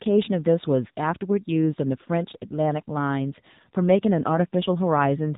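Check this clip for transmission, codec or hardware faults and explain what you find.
There's one fault, and it runs the whole way through: the speech has gone through an AMR narrowband mobile codec. Everything above about 3.8 kHz is gone, so the sound is boxed-in and phone-like. The codec rebuilds speech from a vocal-tract model fed by a few pulses per short subframe, and at this bitrate the damage is plainly audible as a buzzy, synthetic edge. That fits a low AMR-NB mode of around 7.4 kbps.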